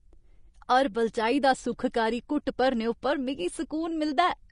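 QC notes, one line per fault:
Throughout: Vorbis compression, likely the cause of the plainly audible codec damage on this speech. Nothing is heard above 10.5 kHz, and the upper band that remains has a hissy, grainy texture where fine high-frequency detail has been replaced by noise of similar energy. Tones sound roughened and consonant onsets sound smeared. The audio points to a low-rate encode, which fits roughly 34 kbps, where the encoder spends few bits on the treble residue.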